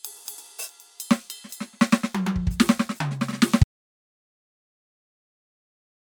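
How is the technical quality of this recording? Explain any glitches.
The recording has one glitch: an audio dropout to silence that starts at 3.64 s and runs to the end of the clip. The input signal was likely lost, through a disconnected source, a failed link or an accidental mute, while the recorder kept writing silence. The music stops abruptly mid-flow, and the last 2.5 s or so are complete silence with no room tone, so whatever was playing during that stretch is gone.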